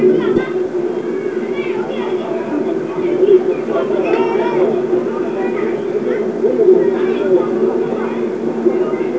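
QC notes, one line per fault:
0.36–0.38 s, skip ahead: Playback jumps forward with no fill. Around 0.7 s of the sound is simply gone. Later audio was already queued, so the missing stretch was dropped and the two sides were joined almost directly.
0.56–2.24 s and 4.76–6.63 s, jitter buffer speed-up: Both stretches run 3% fast at unchanged pitch. The buffer held more audio than its target, so it cut many short pitch-period pieces in a row, roughly 70 ms and 50 ms in total.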